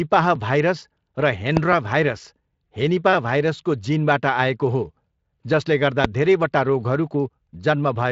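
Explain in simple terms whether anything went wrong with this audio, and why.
Invalid numbers at full scale, at 1.57 s, just after "भाइरस र": a calculation produced impossible values, which were pushed to the loudest possible level. The affected block lasts under a millisecond, so it comes out as a single sharp bang.

A repeated buffer follows at 1.73 s, also just after "भाइरस र": fresh audio didn't arrive in time, so the playback device replayed the previous 5 ms chunk once more. The hard joins at the repeat make a brief click rather than an audible stutter.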